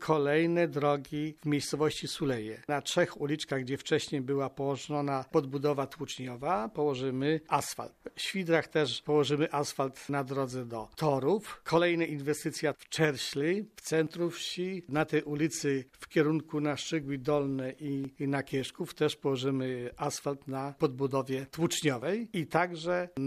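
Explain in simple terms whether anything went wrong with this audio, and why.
Something did go wrong. The recording system likely handles the audio in chunks of about four seconds, and each time it closes one chunk and opens the next it drops a tiny sliver, roughly a fiftieth of a second, then joins the two sides directly. This is audio missing between chunks. You hear it as brief skips at 10.09, 14.07, 18.05 and 22.02 seconds, spaced evenly about four seconds apart.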